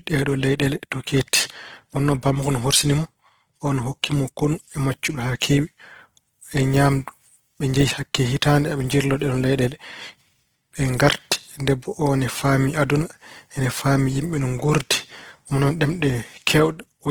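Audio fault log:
Throughout: Opus compression. The speech sounds grainy and rough, with a noisy texture in place of clean harmonics. The sound fits a likely cause of Opus in its music (CELT) mode at a low bitrate, around 16 kbps. Short of bits, the encoder holds each band's energy but fills much of the detail with folded copies of lower bands or with noise. Bandwidth stays full, with content reaching about 20.2 kHz.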